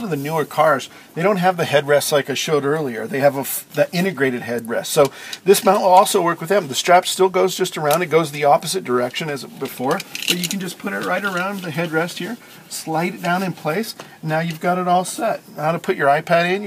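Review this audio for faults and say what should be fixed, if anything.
From 5.50 to 5.99 s there's hard clipping: peaks overdrive a stage by about 3 dB and get sliced flat, giving crackle. Leave more headroom before that stage.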